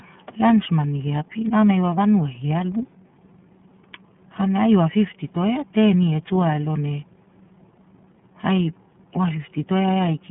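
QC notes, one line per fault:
Throughout, iLBC codec: the speech sounds boxed-in and plainly rough, with a slightly synthetic, buzzy grain, and nothing above about 3.6 kHz, with the low end thinning below 150 Hz. This is narrowband VoIP coding that rebuilds the excitation of each frame on its own, without drawing on the previous one. The texture suggests 30 ms frames, which fits the 13.33 kbps mode, and the narrow telephone line band strips out sibilance and air.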